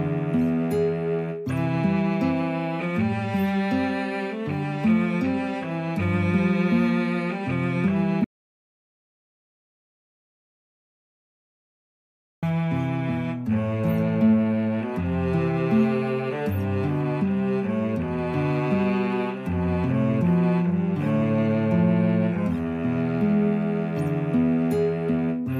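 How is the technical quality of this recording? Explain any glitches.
The recording has one clear glitch: an audio dropout to silence from 8.24 s to 12.43 s, about 4.18 s long. The sound stops mid-flow and resumes just as abruptly. The gap is silent with no room tone or hiss, unlike a natural pause, which leaves some background. The input was likely lost through a disconnect, link failure or mute while recording continued writing silence, so whatever happened then is gone.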